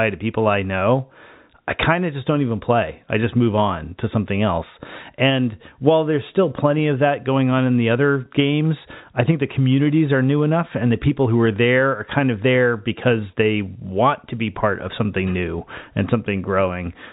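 No technical faults are audible.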